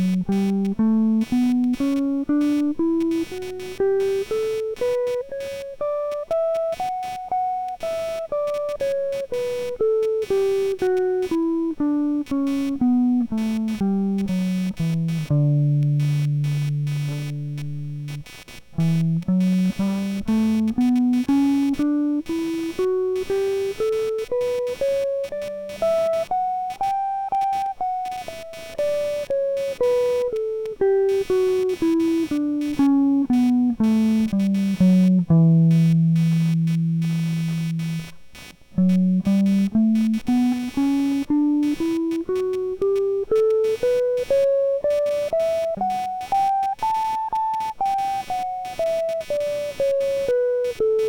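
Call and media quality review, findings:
Computer activity noise, throughout the music. Processor, graphics or mouse load currents disturbing the shared audio ground, so the interference follows the computer's activity, not the music. Audible as buzzy, chirping pulses repeating at around 300 Hz, roughly 20 dB below the music, coming and going independently of the playing. Probable component: grounding between computer and audio interface or onboard audio.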